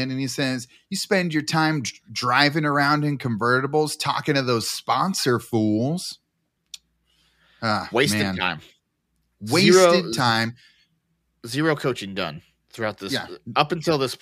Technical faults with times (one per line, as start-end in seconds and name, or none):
none